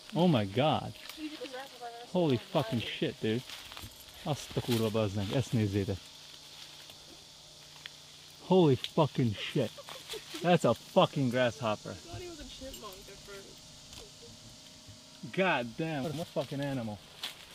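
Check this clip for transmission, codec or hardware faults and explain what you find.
Four brief episodes of frames out of order occur at 1.35–1.55 s, 2.81–2.86 s, 4.50–4.61 s and 16.04–16.24 s. In each, two adjacent blocks of frames were decoded in swapped order, with blocks of about 93 ms, 23 ms, 46 ms and 93 ms respectively. Each stretch plays with its halves exchanged, giving a garbled flutter. Unlike a dropout or a repeated frame, no time is lost and nothing is duplicated.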